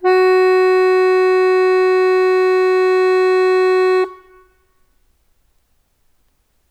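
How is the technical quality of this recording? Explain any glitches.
No glitches are audible anywhere in the music; there are no technical faults to explain.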